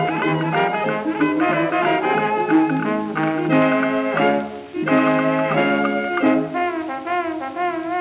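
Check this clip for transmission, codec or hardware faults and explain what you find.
No transmission, codec or hardware faults can be heard in the clip. Nothing in the sound suggests a problem anywhere along the chain that captured, carried or reproduced it.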